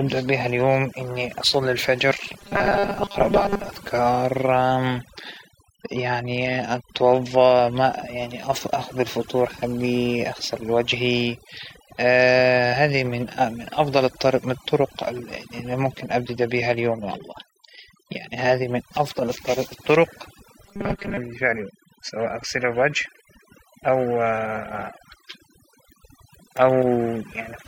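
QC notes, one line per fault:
throughout: overdone noise removal. The gaps between phrases drop to near silence sprinkled with twinkling specks. Suppression set too aggressively is muting individual frequency bands whenever they sit close to the estimated noise floor, taking quiet speech detail with them. On a spectrogram the background shows as dark empty regions dotted with isolated bright flecks, and the fainter harmonics and breathy edges of the speech look ragged and patchy.
2.39–3.69 s and 20.64–21.18 s: robotic sound from repeated short buffers. In both stretches the speech turns into a rigid metallic buzz pitched at 200 Hz that still roughly tracks the syllables. The likely cause is audio arriving too seldom, with playback looping a 5 ms slice to fill the gap, so most of the real signal is skipped. A spectrogram shows evenly spaced horizontal lines at 200 Hz and its multiples, and the waveform shows a short pattern repeating identically.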